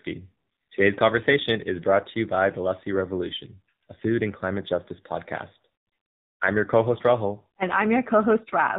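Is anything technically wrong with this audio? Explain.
Yes. Throughout, the speech carries AMR narrowband mobile codec damage: nothing passes above 4 kHz, and the vocal-tract model's sparse pulses leave a buzzy, synthetic tone, consistent with a low mode around 7.4 kbps.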